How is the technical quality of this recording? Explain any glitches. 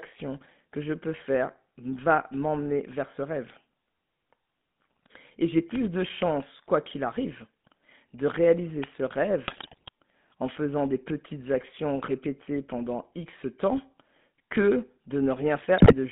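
The quality is pretty rough: it's phone-grade speech with a couple of clicks and two patches of garbled breakup.

GSM full-rate codec, throughout: The band runs only from about 150 Hz to 3.6 kHz, which fits a 13 kbps GSM full-rate stream. That codec models the voice with a vocal-tract filter and a thinned-out pulse excitation, so the speech comes across plainly buzzy and gravelly.

Electrical switching spike, at 5.75 s and 8.84 s: You get a sharp, very brief snap riding on top of the speech each time, likely from a nearby switch or discharge arcing and being picked up by the audio line. Each one lasts only a couple of milliseconds.

GSM bit errors, from 9.48 to 9.89 s and from 15.78 to 15.94 s: Corrupted bits reached the decoder and scrambled its filter, pitch and gain values frame by frame. The voice falls apart into squawks, pops and gargling, and the first stretch runs longer.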